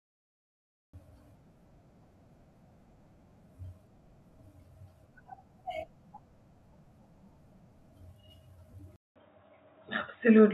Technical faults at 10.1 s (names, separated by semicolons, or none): input switched to a poorer device